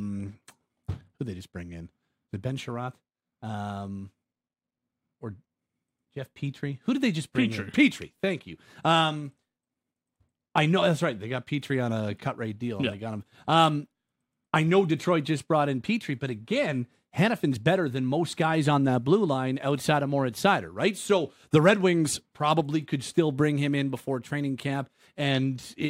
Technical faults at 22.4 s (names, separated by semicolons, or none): none